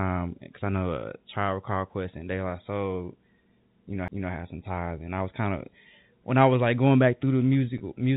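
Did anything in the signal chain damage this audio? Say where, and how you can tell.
Yes. There are two faults, at two different stages.

The first is a CD skip at the playback stage, heard as a tick at 4.08 s. The player mutes for only a few milliseconds and then resumes from another point on the disc's spiral, so the speech jumps instead of continuing. On the waveform it shows as a tiny flat gap with a step discontinuity on either side. On the spectrogram it is a thin broadband vertical line, and the harmonic contours don't line up across it.

The second is packet loss with pitch repetition at the network stage, from 7.78 to 7.80 s. About 20 ms of audio went missing, which fits a single lost packet. The receiver filled the hole by looping the last pitch period, so the sound briefly holds with a slightly buzzy quality. On the waveform you see identical cycles repeated. On the spectrogram the harmonics go flat for that instant, all below the 4 kHz ceiling of the G.711 telephone channel, then cross-fade back into moving speech.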